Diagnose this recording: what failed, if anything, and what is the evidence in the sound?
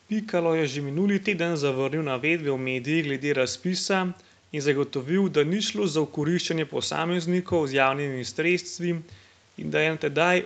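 Nothing in the recording points to a failure at any stage: the speech carries the ordinary signature of a call microphone chain and a WebRTC path, band-limited with nothing above 8 kHz, which fits an Opus codec running at a wideband setting.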